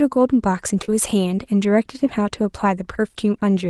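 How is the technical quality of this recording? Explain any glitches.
The recording has two brief back-to-back dropouts in the speech. Short concealed packet loss at 0.81 to 0.85 s and 0.85 to 0.90 s: audio arrived too late, so the decoder extended the preceding sound and faded back, leaving a quick smear or wobble. The call path's coding limits the top end to about 12 kHz, which fits Opus at a modest bitrate.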